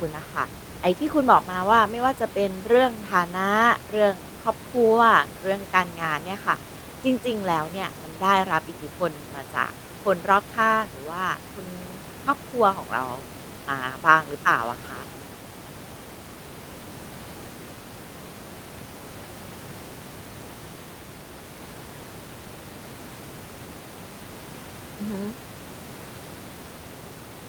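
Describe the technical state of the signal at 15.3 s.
At 15.3 s the speech signal is intact, with only the room's own background noise sitting about 16 dB below the speech.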